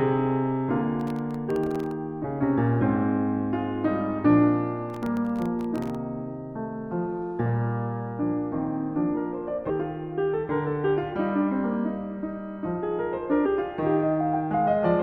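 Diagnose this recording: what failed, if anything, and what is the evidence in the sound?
Processor overload crackle appears from 1.00 to 1.91 s and again from 4.90 to 5.95 s, at the driver and buffer stage. Over each stretch the music is torn by a gritty burst of crackle that stops once the load passes. The sound points to a buffer well under a millisecond long, missed a few dozen times in a row. Each missed deadline leaves a sliver of silence with hard edges, and together these tiny dropouts form the crackle.

Damaged data in a compressed stream sits at the codec and decoding stage, heard as brief glitches at 2.23 s and 9.69 s, and from 13.45 to 13.47 s. Each lasts only about 10 to 20 ms. Corrupted bytes in the compressed stream make the decoder misread or reject the affected frames. It then loses sync and searches for the next valid frame header.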